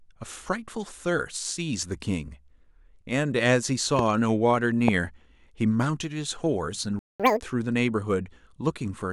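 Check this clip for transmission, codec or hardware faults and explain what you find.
The clip has three kinds of fault: two loud pops, a playback stall, and a catch-up at higher speed.

Loud pop, 3.99–4.01 s and 4.88–4.90 s: the speech carries on under two sharp pops, about 10 dB and then about 20 dB above it. A voltage glitch, likely from a switch or static, causes them. Each shows as a spike in the waveform and a vertical broadband stripe on the spectrogram.

Playback stall, 6.99–7.20 s: the speech cuts to silence for about 205 ms, likely because the player's buffer ran dry, leaving a flat waveform gap and a blank column on the spectrogram.

Catch-up at higher speed, 7.20–7.40 s: the player resamples its backlog at double speed, so pitch jumps roughly ten semitones. On the spectrogram, the harmonics shift upward and compress in time.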